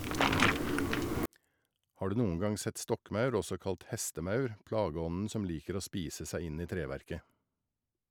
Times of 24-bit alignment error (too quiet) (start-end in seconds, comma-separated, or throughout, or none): 1.26-8.11